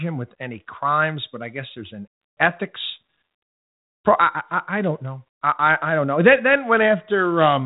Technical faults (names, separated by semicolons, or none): none